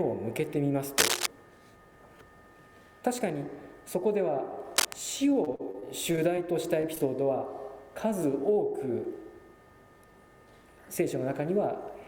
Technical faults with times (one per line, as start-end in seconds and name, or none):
0.97-1.26 cable scratch noise
4.76-4.93 cable scratch noise
5.29-6.39 repeated packet loss (robotic sound)
6.81-7.02 short concealed packet loss